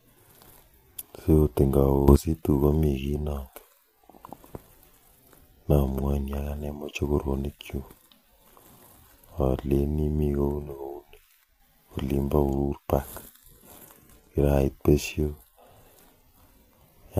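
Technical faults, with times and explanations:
Throughout: low-delay AAC compression. The speech sounds rough and grainy. Noise fills the gaps between pitch harmonics, and the top band sounds thin and synthetic. This is likely AAC-ELD coding, whose short frames resolve pitch poorly, and the damage fits a bitrate around 32 kbps.
2.08–2.16 s and 11.44–11.6 s: sudden gain jump. The level rises by about 12 dB in the first range and drops by about 6 dB in the second. Speech and background noise shift together, likely because the digital gain was changed without a ramp.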